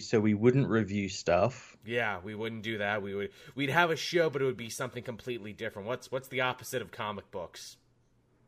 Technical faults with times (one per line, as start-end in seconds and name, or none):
none